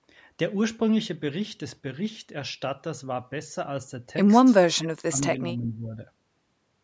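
From 4.62 to 6.0 s the speech dips and breaks up, dropping around 30 dB; likely speech suppressed in double talk, with the echo canceller ducking the talker.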